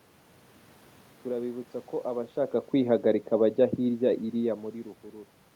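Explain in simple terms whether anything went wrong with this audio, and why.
One thing went wrong: automatic gain falling. From 2.73 to 4.67 s the level control decided things were too loud or too noisy and gradually turned everything down a bit, room noise included, unlike the natural loudness shifts from the talker moving around 2 and 4.5 s.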